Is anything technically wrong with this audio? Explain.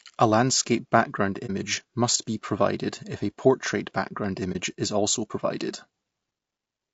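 Yes. Two problems are audible.

Throughout, the speech has a rough, grainy texture, likely from low-delay AAC compression (AAC-ELD) at a bitrate around 32 kbps. Its short frames can't resolve the pitch harmonics finely, and the bit budget is tight, so noise fills the gaps between harmonics and the upper band sounds thin and synthetic. On a spectrogram the harmonic stripes look smeared, with speckled energy between them and a coarse, patchy top band.

At 1.46 to 1.50 s and again at 4.52 to 4.56 s, the sound briefly drops out. This is AAC frame loss with muting, consistent with a single lost frame each time. The decoder zeroes the missing spectrum, and the overlapping windows fade the signal down and back up, leaving a brief dip of about 40 ms. A waveform shows a short tapered dip, and a spectrogram shows a narrow vertical blank band across all frequencies.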